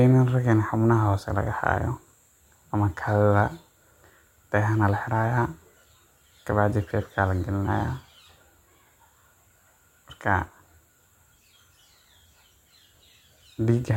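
Nothing in the speech stood out as a technical fault on listening.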